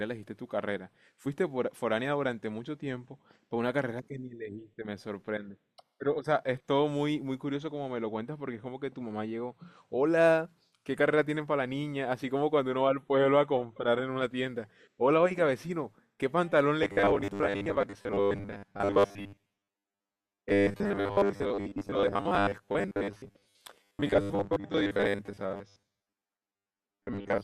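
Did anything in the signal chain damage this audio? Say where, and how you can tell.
Yes. From 16.83 s to the end, the speech becomes a rigid, metallic robotic sound from repeated short buffers. A fixed 100 Hz buzz rides over it. This points to the buffer stage, likely starved and looping the last 10 ms. Most real audio is skipped.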